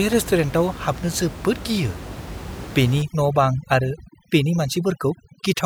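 From 3.02 s onward, overdone noise removal sets in. The suppressor pulls down any frequency band sitting near its noise estimate, so the room noise, about 14 dB below the speech before this point, drops and breaks up into twinkling specks, and quiet speech detail goes too.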